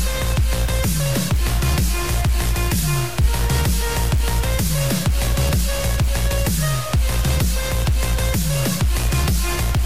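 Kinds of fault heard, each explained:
Low bit depth without dither: likely truncation to about 4 bits, leaving coarse, signal-following grit roughly 20 dB down; waveform shows visible stair-steps, spectrogram broadband hash tracking loudness.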